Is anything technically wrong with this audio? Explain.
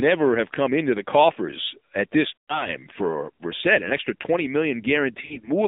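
Yes, there are two problems. The whole clip of speech has been through the AMR narrowband mobile codec, with the band squeezed to roughly 250 Hz to 3.7 kHz. It sounds buzzy and synthetic, which fits a low rate around 7.4 kbps.

There are also lost AMR speech frames. From 2.36 to 2.70 s, about 120 ms of speech drops out. The decoder stretches the last good pitch and vocal-tract settings while fading them, so the sound drags and then sinks. At 5.22 to 5.50 s, the losses are scattered with runs no longer than 40 ms, which gives brief dips and warbles instead of a fade.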